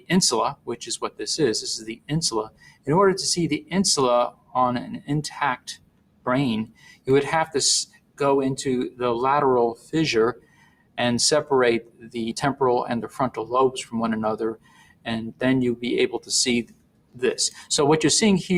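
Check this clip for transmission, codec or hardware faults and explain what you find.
A noise suppressor designed for speech has been left running on this audio, and it repeatedly turns down parts of the sound itself.

Noise suppressor applied to music or sounds: Throughout the clip, the gain swings by roughly 20 dB because the processor treats steady tones, ambience and decays as background noise. Attacks pass through while sustained parts sink, so the level pumps. On a waveform, sharp peaks are followed by envelopes that collapse too quickly.

Sound cut by the noise suppressor: At 0.0–1.21, 1.79–2.88, 4.3–8.2, 9.75–10.98, 11.81–12.16 and 14.54–17.7 s, held or fading sound drops by about 20 dB (about 19 dB in the first stretch and about 17 dB at 11.81 s). On a spectrogram these stretches show darkened, hollowed-out bands and tails that end abruptly.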